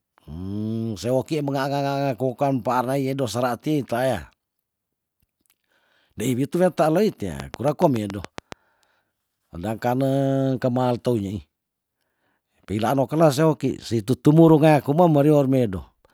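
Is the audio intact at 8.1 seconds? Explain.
No, 8.1 s sits inside a train of clicks from 7.4 to 8.53 s: about ten evenly spaced pops at roughly 7 per second, well above the speech, likely from electrical interference.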